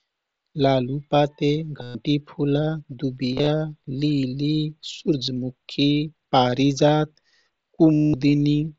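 Speech with concealed Bluetooth headset packet loss. Lost packets are filled by repeating recent waveform. Long runs at 1.82–1.95 s and 7.94–8.14 s give a held buzzy tone. Scattered losses at 3.32–3.47 s warble, and brief ones at 5.26 s and 6.51 s barely show.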